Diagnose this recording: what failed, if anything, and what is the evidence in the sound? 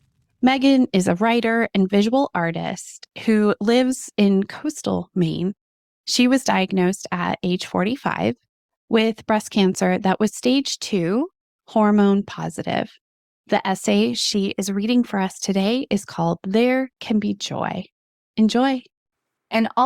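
Nothing in the speech points to a failure at any stage of the chain.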